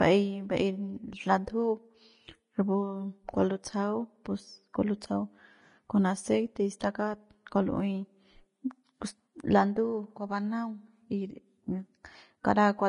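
From start to finish the speech carries a grainy, hissy edge, with roughened tones and consonant attacks softened. Nothing sounds above about 10.5 kHz. This is likely Vorbis compression at a low setting, which fits a bitrate near 31 kbps. The encoder cut the top of the spectrum and quantised the remaining treble so coarsely that its fine detail was replaced by noise of similar energy, producing the roughened texture.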